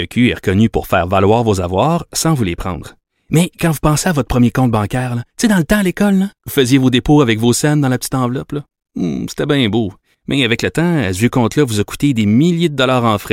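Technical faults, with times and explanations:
No technical fault can be heard anywhere in the speech recording. There is nothing here that needs a time or an explanation.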